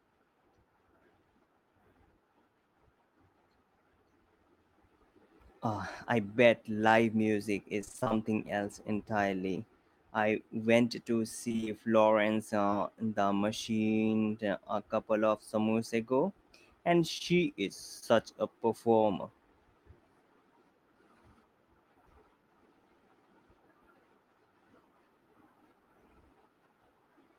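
From 7.81 to 8.12 s the speech turns choppy and robotic. This is repeated packet loss. Eight separate holes land in that stretch, the longest about 24 ms. Each one is bridged by stretching the previous sound. About half of the stretch is synthetic fill, roughly 150 ms in all, so the voice takes on a robotic, stuttering quality. The same thing returns from 11.48 to 11.68 s, with five holes of up to 23 ms and again about half filled in.

Short concealed packet loss follows. From 12.62 to 12.74 s, three back-to-back 20 ms holes are each patched by continuing the last sound before the real signal resumes. This is heard as a brief smear or wobble. Two more single holes occur at 17.18 to 17.22 s and 18.00 to 18.04 s. Each loses 20 ms, and about 18 ms of it is filled. These register as quick smears or blurs, and a short consonant can drop out.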